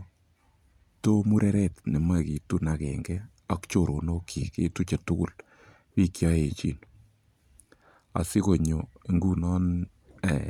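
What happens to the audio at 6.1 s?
Nothing goes wrong at 6.1 s; the speech runs through that moment intact, with no break, click, dropout or distortion.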